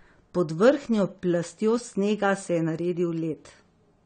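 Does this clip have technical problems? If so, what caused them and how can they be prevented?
Yes. AAC compression damage runs through the whole speech clip, and it is plainly audible. Nothing remains above 9 kHz, so the sound is dull and lacks air. Sibilants come out fizzy and smeared. The likely cause is AAC-LC encoding at a low bitrate, which fits a 32 kbps stream. The encoder dropped the top band and coarsely quantised what was left against its hearing model. Encoding at a higher bitrate, such as 128 kbps or more, prevents this.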